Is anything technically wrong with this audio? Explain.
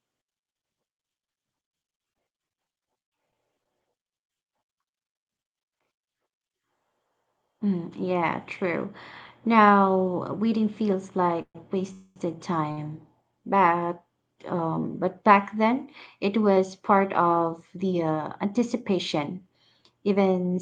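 Yes, the audio has several packet-delivery faults.

From 1.67 to 3.67 s the speech turns choppy and robotic, with small pieces missing. This is repeated packet loss: sixteen short gaps, the longest about 39 ms, each patched by extending the previous sound before the next loss arrives.

Around 4.33 to 4.37 s there is a brief smear or wobble, a short concealed packet loss. About 20 ms of audio never reached the decoder, and the receiver covered the hole by continuing the preceding sound, then blended back into the real signal.

Right after "waiting feels", from 11.42 to 11.57 s, the sound hangs as a fading buzz, drops to about 60 ms of silence, and then resumes where it left off. A second, longer hang follows at 11.93 to 12.18 s, ending in a brief silence. These are call audio freezes, likely caused by packets held up in transit until the jitter buffer ran dry. The receiver stretched the last sound across roughly 130 ms and 230 ms of waiting, so a pause was inserted but nothing was lost.

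At 12.72 to 12.79 s one sound is held slightly too long, with a faint buzzy dip. This is a short stall from a late packet: the receiver stretched the audio by about 53 ms until the packet arrived, then continued without skipping anything.

Throughout, the audio is band-limited to about 12 kHz, which fits an Opus call codec at a moderate bitrate.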